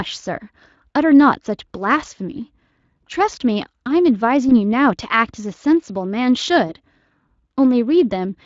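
At 4.49 to 4.52 s and again at 6.67 to 6.74 s, VoIP packet loss concealed by the speech codec occurs. Each gap fits a single lost 20 ms frame. The Speex decoder extrapolates the last pitch and filter, smearing the speech into a brief buzzy tone or coloured noise that fades, and the voice stays weak or distorted after packets resume.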